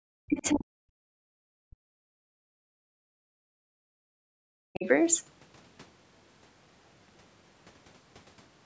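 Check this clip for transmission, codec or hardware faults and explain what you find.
Two faults stand out, both typical of a call with an echo canceller struggling when both ends talk at once.

Speech suppressed in double talk occurs from 0.00 to 1.32 s, 1.59 to 2.25 s, 2.49 to 3.98 s and 4.20 to 4.86 s. The likely cause is the echo canceller mistaking the talker for loudspeaker echo while the far end spoke, so it ducked everything. The voice sinks by as much as about 40 dB. On a waveform the envelope collapses into gaps; a spectrogram shows the harmonics fading and tearing across the whole band.

The other side's voice leaking through appears briefly at 0.45 to 0.57 s, about 20 dB below the talker. The likely cause is far-end audio from the loudspeaker reaching the microphone and escaping cancellation. It is heard as a faint scrap of a second voice inside the suppressed stretch. A spectrogram would show a weak, separate harmonic pattern overlapping the dimmed main speech, with little visible trace on the waveform.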